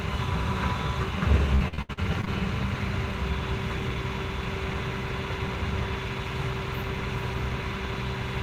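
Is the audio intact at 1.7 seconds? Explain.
No, 1.7 s falls inside repeated packet loss from 1.55 to 2.28 s: seven gaps, each patched by stretching the previous sound, leaving it choppy and robotic.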